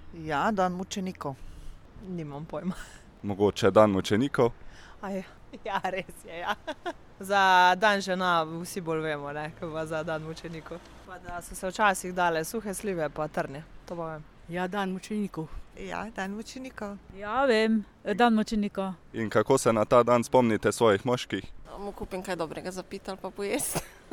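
Nothing stood out as a technical problem on listening to the audio.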